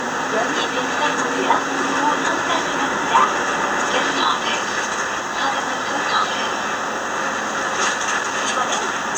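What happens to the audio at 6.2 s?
Nothing goes wrong at 6.2 s; the audio plays through that moment intact, with no dropout, click or other fault.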